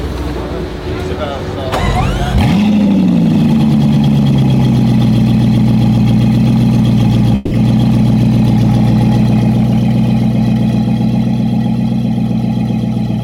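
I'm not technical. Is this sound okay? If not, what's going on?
No. From 7.35 to 7.53 s the sound turns into a brief fading buzz, then resumes with a piece missing, likely a long network dropout where audio never arrived.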